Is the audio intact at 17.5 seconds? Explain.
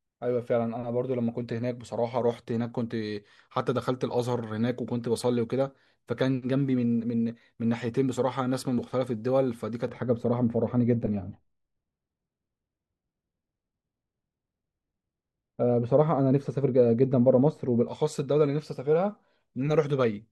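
No: de-emphasis was applied wrongly from 9.88 to 17.88 s, a treble cut with nothing to undo, sloping to about 11 dB down at 10 kHz, so the speech sounds dull and muffled.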